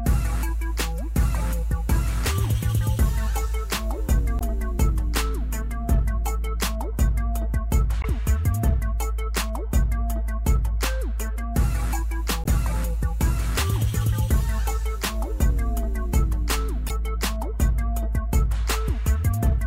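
At 4.38 to 4.42 s, 8.01 to 8.05 s, 12.42 to 12.47 s and 16.87 to 16.91 s, the audio breaks into a short blip. Each lasts about 40 ms. These are damaged data in a compressed stream. Bytes in the encoded file were lost or overwritten there. The decoder could not read those frames properly and lost sync. It then hunted for the next valid frame header. The result is a brief glitch.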